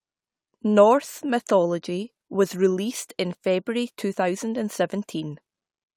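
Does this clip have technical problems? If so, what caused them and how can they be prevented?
No technical problems are audible.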